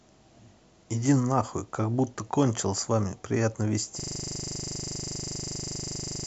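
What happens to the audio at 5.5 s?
At 5.5 s the speech is a rapid 25 Hz buzz, because a system hang loop from 4.00 s to the end repeats one 40 ms stretch of the ring buffer.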